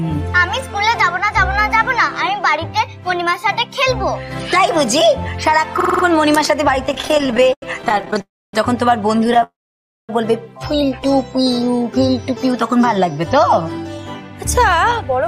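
A system hang loop comes first, from 5.81 to 6.04 s. A 46.4 ms slice of sound repeats five times at 21.5 Hz. It gives a hard, rhythmic stutter rather than a buzz. That loop length fits a 2048-sample buffer. The computer or driver stopped feeding new audio while the hardware kept replaying that same ring buffer. The audio carries on afterwards with essentially nothing lost.

Repeated stalls, a stutter, follow from 6.86 to 8.20 s. There are 34 short gaps, filling 417 ms in total. The longest lasts 87 ms. About 31% of the span is filled-in sound. Packets arrived late or too slowly, and the jitter buffer kept running dry. Each time, the receiver stretched the last sound until data came. Nothing is missing, but the audio drags and jerks. A shorter burst runs from 9.24 to 9.42 s. It has six gaps totalling 58 ms, the longest 13 ms.

A call audio freeze sits between those bursts, from 8.21 to 8.54 s. 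It inserts 321 ms, and 270 ms of that is silence after the held sound fades. A longer freeze runs from 9.43 to 10.10 s. It adds 655 ms, with 570 ms silent. The likely cause is packets held up in transit, emptying the jitter buffer. The audio then resumes where it stopped. Nothing is dropped, but the timing is pushed back.

A jitter buffer slow-down runs from 11.37 to 12.04 s. Playback drops to 90% speed at unchanged pitch, adding 73 ms. The receiver repeated tiny pitch-length pieces again and again to rebuild its reserve. The sound is drawn out.

A jitter buffer speed-up runs from 13.78 to 15.20 s. The audio plays at 108% speed and keeps its pitch. Roughly a tenth of a second is cut out in small pieces to shrink excess buffered delay. The result sounds hurried.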